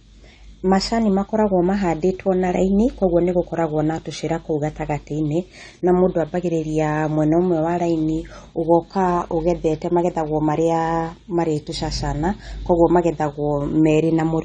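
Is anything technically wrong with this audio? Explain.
Yes. Throughout, the speech sounds dull and smeared, with nothing above 9 kHz. The likely cause is AAC compression near 32 kbps, which cuts the highs and quantises coarsely.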